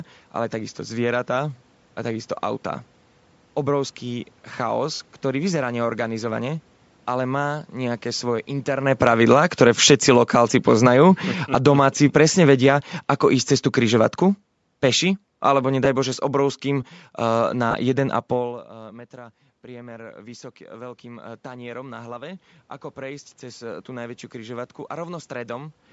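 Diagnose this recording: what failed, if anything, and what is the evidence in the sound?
Codec stage: speech carries a breathy, grainy edge throughout, likely from Bluetooth LC3 compression near 48 kbps with 10 ms frames; the spectrogram shows noise-filled patches in the upper band.

Network stage: lost LE Audio frames at 4.94 s (60 ms), 15.85 s and 17.71 s (30 ms). The decoder repeated the spectrum with scrambled phase, leaving brief noisy smears across harmonics.

Call processing: automatic gain falling from 8.81 to 17.51 s, just after "ale má nejaké svoje", drops about 16 dB. The waveform envelope, including room noise, slowly shrinks.

Call processing: automatic gain rising from 19.11 to 25.81 s lifts speech and background together by about 10 dB. The waveform swells gradually as the AGC chases a quieter input.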